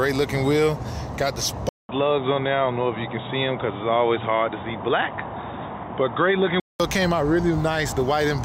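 At 1.69 s the audio drops out for 200 ms, then returns band-limited, with a new noise floor roughly 35 dB down at similar level. This is likely an input switched to a poorer device, reverting at 6.80 s.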